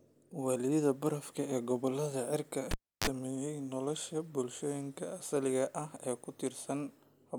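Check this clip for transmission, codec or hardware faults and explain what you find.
One hardware fault: a cable pulled and plugged in between 2.71 and 3.07 s. A live lead left its socket, giving a pop and 309 ms of near silence. As only the tip touched on reinsertion, 30 ms of 50 Hz mains buzz broke through, then a second pop as the speech returned.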